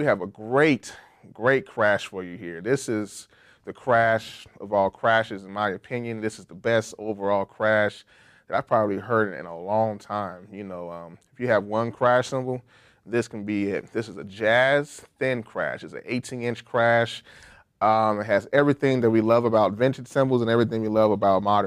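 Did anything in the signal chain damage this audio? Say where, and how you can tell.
No, nothing in the signal chain damaged this audio.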